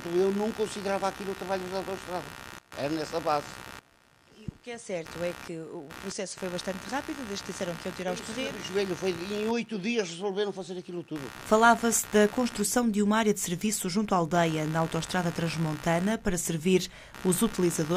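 Computer activity noise runs through the whole clip: a buzzing, chirping layer pulsing around 70 times a second, only about 15 dB below the sound. Unlike steady mains hum, it shifts with processor or mouse load disturbing the shared ground, not with the audio.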